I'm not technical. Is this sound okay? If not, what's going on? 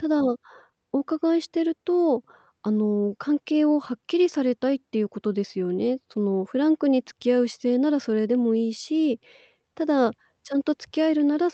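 No. There's clock drift between sender and receiver. The sending device's clock runs about 5% slow, so the receiving side keeps running short of audio. Unlike a network dropout, which leaves sudden gaps, this is a steady mismatch that lasts the whole clip.

To cope, the receiver makes repeated timing corrections from 0.04 s to 11.26 s. It stretches the speech by repeating tiny slivers, adding roughly half a second overall. If you notice it at all, it comes across as small hiccups and a slightly dragging, uneven pace.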